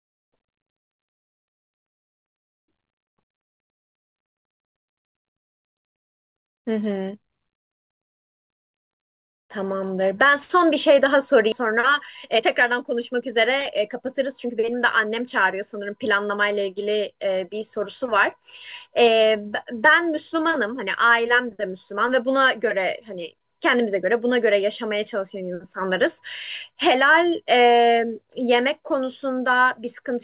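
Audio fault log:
11.52 s, skip ahead: The speech jumps forward with no gap and nothing filled in, so roughly 0.7 s of audio is simply gone and the two sides are butted together. That points to a stretch dropped while later audio already sat waiting in the jitter buffer. Unlike a dropout or concealed loss, there is no silence, buzz or smeared repeat. The talk just lurches ahead, cutting the delay by about that same amount.
11.62–15.74 s, jitter buffer speed-up: Right after the jump, the speech runs at 107% speed while the pitch stays the same, so it sounds hurried but not chipmunk-like. The buffer was holding more audio than it aims for and trimmed short pitch-period pieces many times in a row, roughly 0.3 s in total, to work the delay back down. A resampling or clock fault would raise the pitch along with the tempo. This one does not, and the narrowband 4 kHz ceiling of the G.711 mu-law call path stays unchanged through it.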